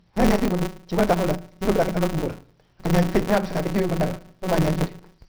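Speech audio that passed through a low-bitrate stage and was then saved at a high bitrate: the MP3 artefacts of that first encoding remain. The likely cause is a 24 kbit/s MP3 later re-encoded at around 158 kbit/s, which restores nothing that was lost. There is also a block size mismatch (truncated), in which each block loses its tail because the reading stage takes fewer samples than were written, which fits a 256-sample read. Throughout, this produces a steady 188 Hz buzz at the block rate, and the speech runs 1.88 times faster at about its normal pitch.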